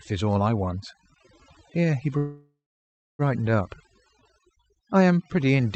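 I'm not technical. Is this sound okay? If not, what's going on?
No. Overdone noise removal runs through the whole clip: the background drops and breaks up into twinkling specks, and quieter parts of the voice are stripped away.

Between 2.17 and 3.22 s there is a call audio freeze, likely from delayed network packets. The last sound trails off, then about 0.64 s of silence follows. Speech resumes where it stopped, nothing lost, but a second late.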